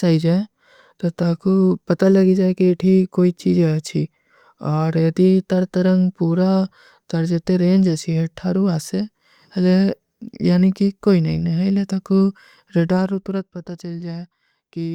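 From 12.72 to 13.48 s a fine ticking, zipping texture rides on the speech as its level drops by about 10 dB. This is zipper noise: the gain falls in unsmoothed steps of about 1 dB, roughly ten per second, each step leaving a small click.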